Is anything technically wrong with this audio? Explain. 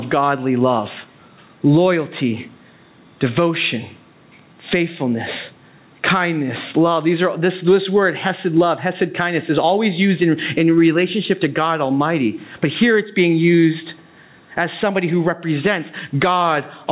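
Yes, there's gain pumping all the way through the speech. The level is likely set far too high with a fast limiter clamping down, so the gain swings around 20 dB, pulling down under each loud syllable, leaving everything squashed. The band stops at 4 kHz, which fits a G.711 call codec.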